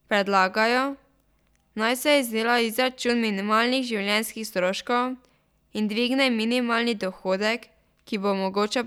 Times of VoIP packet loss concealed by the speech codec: none

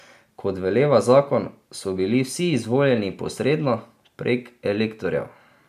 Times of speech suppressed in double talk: none

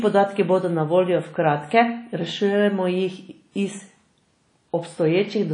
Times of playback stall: none

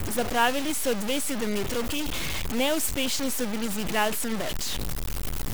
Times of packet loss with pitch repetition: none

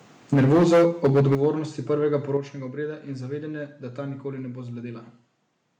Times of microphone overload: 0.32-1.46

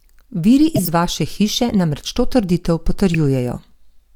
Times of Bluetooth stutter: none

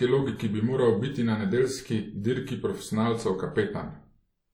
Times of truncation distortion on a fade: none

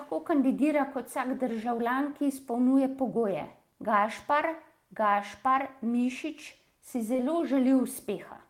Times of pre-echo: none

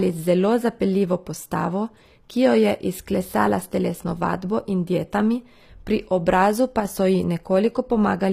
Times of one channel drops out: 6.80-6.85

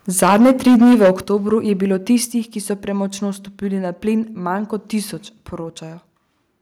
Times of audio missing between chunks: none

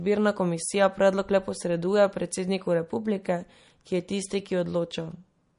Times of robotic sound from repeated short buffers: none

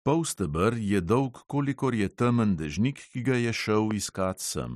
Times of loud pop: 3.91-3.93

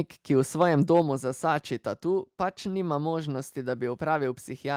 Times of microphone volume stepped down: 1.02

